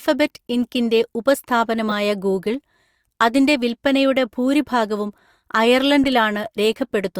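Damaged compressed frames in this speech clip were decoded and played as if intact, a corrupt frame decoded fault. At 1.89 to 1.92 s, misread gains throw energy to stray frequencies in a loud, brief burst. At 6.04 s, a shorter and quieter blip follows.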